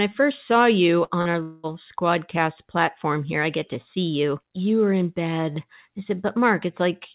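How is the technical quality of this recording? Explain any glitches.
The recording has a tight cluster of network glitches between 1.04 and 1.66 s. The audio is band-limited, with nothing above 4 kHz, which fits a narrowband telephone codec such as G.711 mu-law over a call path.

Burst of packet loss, 1.04 to 1.13 s, right after "first saw you": several consecutive packets failed to arrive in time. The receiver extended the last sound for about 57 ms and faded it, producing a brief fading continuation. Roughly 60 ms of the original speech is then skipped, so the audio resumes further along with that piece missing.

Short concealed packet loss, 1.22 to 1.28 s and 1.31 to 1.37 s, still just after "first saw you": two smaller gaps of about 30 ms each. The decoder bridged them with synthesized continuation of about 36 ms and 24 ms, then crossfaded back into real audio. Each one is heard as a short smear or wobble, and a brief consonant can disappear inside the patch.

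Long network dropout, 1.43 to 1.66 s, just before "squadcast platform here I": this was likely a stall in packet delivery lasting over a fifth of a second. The receiver filled about 207 ms with a decaying buzz/hiss continuation, never reaching true silence. Around 210 ms of speech was lost, and playback picks up again at a later point in the stream.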